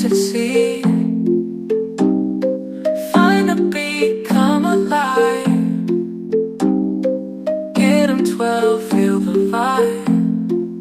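There are no technical faults to describe in this audio.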